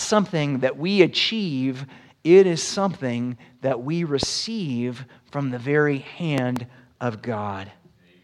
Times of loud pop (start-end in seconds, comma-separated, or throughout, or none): 4.23-4.25, 6.38-6.59